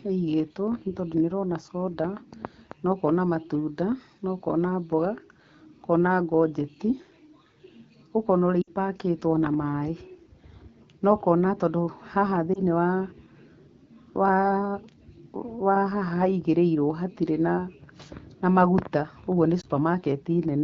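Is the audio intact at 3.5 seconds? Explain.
Yes, the audio is intact at 3.5 seconds: no fault occurs there, and the speech passes through the AMR wideband (HD Voice) codec at 12.65 kbit/s with only light coding damage.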